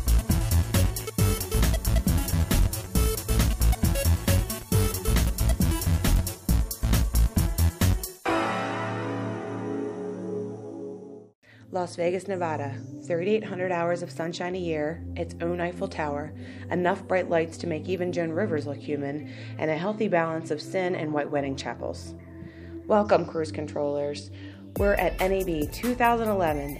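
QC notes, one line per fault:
Nothing to flag on this one; there's nothing in the audio that calls for a note.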